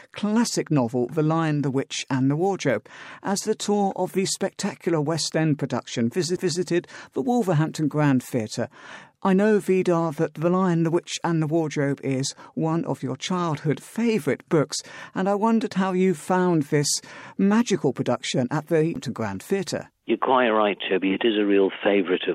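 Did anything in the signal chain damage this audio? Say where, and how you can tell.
Yes, there are two CD skips at the playback stage, at 6.36 s and 18.95 s. At each one a tick is followed by an abrupt discontinuity, where the sound resumes from a different point on the disc. A knock or a flaw made the laser jump off its track and land on another turn of the spiral, and the player muted briefly, for a few milliseconds at the first skip and around 10 ms at the second. On a waveform this shows as a short flat gap joining two unrelated sections. A spectrogram shows a thin vertical broadband line where the texture changes sharply.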